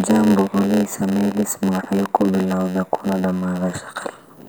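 From start to finish, the speech carries a block size mismatch (padded). One stage hands over blocks slightly shorter than the next stage expects, and each block's remainder is filled with silence. The result is a steady buzz at about 92 Hz and delivery slowed to 0.919 of normal speed, with the timbre kept. The waveform shows regular flat gaps at that rate. The spectrogram shows vertical striping with harmonics spaced about 92 Hz apart.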